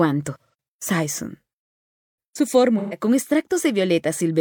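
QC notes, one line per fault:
0.40–0.54 s, AAC frame loss with concealment: a brief smeared, noisy and phasey patch where the sound loses its definition. About 128 ms of coded audio went missing, which fits three consecutive AAC frames, and the decoder filled the gap by reusing the last good spectrum with scrambled phase, so the texture continues but the detail does not.
2.78–2.99 s, AAC frame loss with concealment: the same hazy, phasey smear, again from about 128 ms of lost audio and consistent with three lost frames, concealed from the preceding spectrum rather than decoded.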